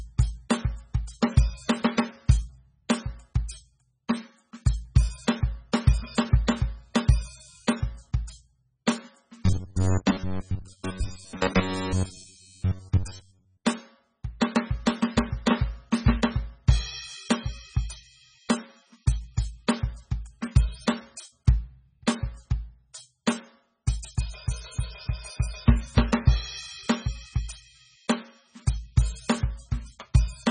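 Throughout the music, the sound is watery and swirly, with nothing above 9.3 kHz and heavy codec damage. It is likely MP3 compression at a very low bitrate, consistent with roughly 16 kbps, where weak frequency lines are dropped and the treble is cut.

From 9.46 to 13.63 s the music turns into a rigid, metallic buzz at 93.8 Hz that only loosely follows the original. This is likely robotic sound from repeated short buffers. Most of the audio is replaced by repeats of a fragment of about 10.7 ms while the real material is skipped.

At 14.40 s a brief hiss of about 16 ms precedes a sharp attack, which sounds softened. This is pre-echo. The codec spread quantisation noise meant for the loud attack across its whole block, filling the quiet moment just before it.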